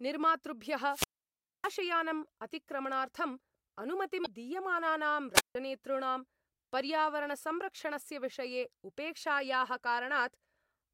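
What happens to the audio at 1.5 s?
At 1.5 s the speech is inside a wireless microphone squelch dropout, which runs from 0.87 to 1.73 s. The radio link from the analogue FM microphone fades. As the signal weakens, hiss and static rise. The receiver's squelch then mutes the output entirely. That leaves a hole of near silence lasting about 0.61 s. The 1.5 s point falls within the dropout. The speech returns at about 1.73 s.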